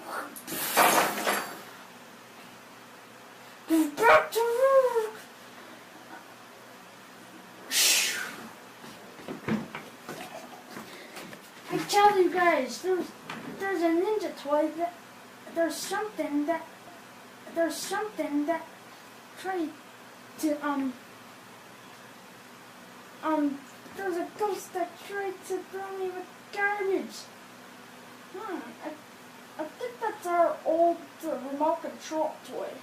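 At 16.87 s a stream segment is repeated: the player queued or fetched the same chunk of audio twice, so the two seconds just heard play again through 18.87 s, adding 2 s to the timeline. The jump back produces a small blip at 16.87 s. On a waveform, the block from 16.87 to 18.87 s has exactly the same envelope as the two seconds before it. A spectrogram shows identical patterns side by side, with a thin vertical discontinuity at the seam.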